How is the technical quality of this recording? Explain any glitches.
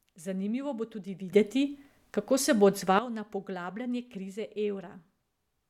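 The recording has one clear fault, a sudden gain jump in the speech. From 1.32 s to 2.99 s, the digital gain was likely switched in a single step rather than ramped, as happens when a level setting or bit shift is applied instantly. Everything in that stretch, the speech and the background noise alike, leaps up by about 12 dB at 1.32 s and drops back just as abruptly at 2.99 s.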